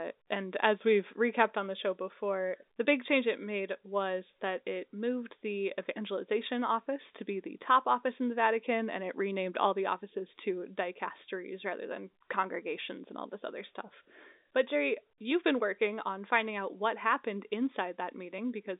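No technical faults can be heard anywhere in the speech. It arrives over a G.711 A-law telephone path at 64 kbps, so the sound is confined to the line band of about 250 Hz to 3.7 kHz, with nothing above 3.8 kHz.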